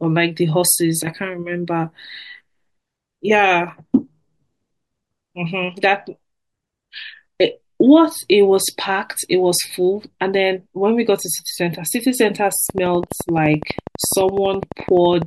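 A train of clicks runs from 12.70 to 15.23 s in this speech clip: about thirty evenly spaced pulses at 11.9 per second, peaking about 10 dB above the speech, likely interference from nearby equipment.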